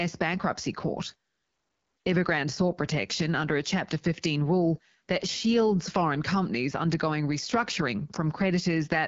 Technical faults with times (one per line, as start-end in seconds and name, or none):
0.00-9.08 AMR wideband (HD Voice) codec